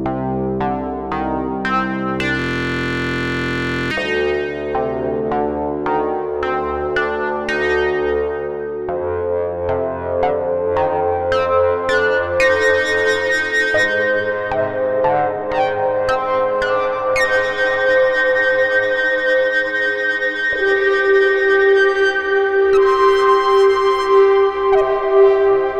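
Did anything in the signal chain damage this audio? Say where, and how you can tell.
Yes. A system hang loop at the driver or buffer stage runs from 2.39 to 3.91 s. The same 23.22 ms piece of audio repeats exactly, dozens of times, producing a steady buzz at 43.1 Hz, which fits a 1024-sample buffer being replayed while the computer was frozen. A dropout leaves silence or a gap instead. This is a rigid, pitched repetition of identical material, which points to the hardware cycling one ring buffer rather than to any codec or network loss.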